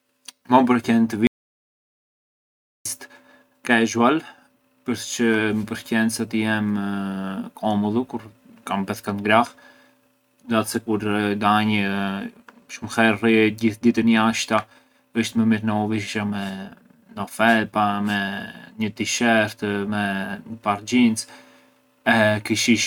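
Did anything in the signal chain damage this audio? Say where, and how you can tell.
Yes: an audio dropout to silence from 1.27 to 2.85 s, after "përqen të", shows as a flat, silent waveform and blank spectrogram, likely a lost input link.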